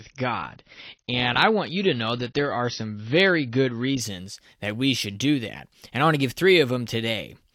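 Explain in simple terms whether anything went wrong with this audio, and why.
For the first 4.0 seconds the speech sounds dull, with nothing above 6.6 kHz. That is an adaptive stream starting at a low bitrate, then switching up suddenly with no gap or silence.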